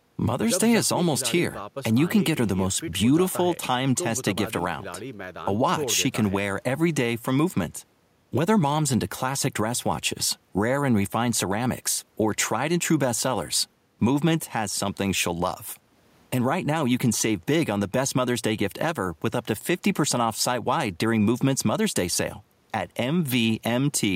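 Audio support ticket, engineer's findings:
Engineer's findings: no audible fault found in the speech audio.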